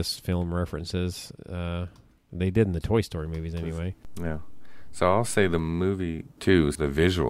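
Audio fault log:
4.05–5.59 s, DC step: Just after "movies anyway", the waveform's zero line jumps by about -33 dBFS and holds, then returns at 5.59 s. Each shift gives a low thump or click, while the speech carries on unchanged over the offset.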